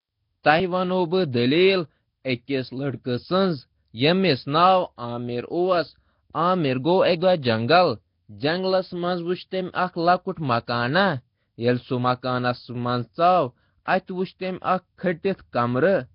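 From the start, the speech has the rough, hissy, underwater smear of heavy low-bitrate transform coding, likely Nellymoser compression at a rate near 22 kbps. Starved bands are noise-filled, and a spectrogram shows a blotchy, grainy texture with nothing above 5.3 kHz.

At 0.43 s a pre-echo appears: quantisation noise spread across a coding block leaks about 14 ms ahead of a sharp attack. It sounds like a brief hiss softening the onset, visible as a smear preceding the transient on the waveform and spectrogram.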